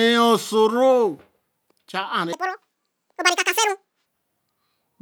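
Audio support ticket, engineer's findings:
Section at the wrong speed, 2.33–4.06 s. Speech runs 1.85x fast, pitch jumps up roughly ten semitones, then snaps back. Likely a resample or clock mismatch in the playback or edit stage, stretch played against the wrong rate.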